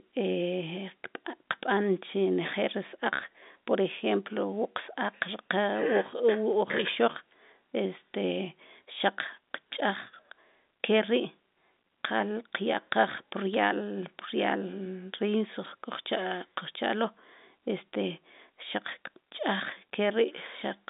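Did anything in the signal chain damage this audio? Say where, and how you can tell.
Yes, at the transmission stage. Just after "qal qyaqaj", at 13.54 s, a brief burst of sharp ticks cuts through the speech, which is otherwise unchanged. These are bit errors on a digital phone line. Flipped bits on the G.711 line corrupt single samples, and a hit on a sign or high-order bit becomes an audible click. The cluster suggests an error rate of roughly 0.2 percent. The 200 Hz to 3.7 kHz telephone band around it carries through as expected.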